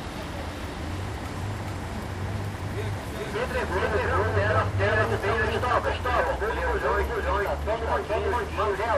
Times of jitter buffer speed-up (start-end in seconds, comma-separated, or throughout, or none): none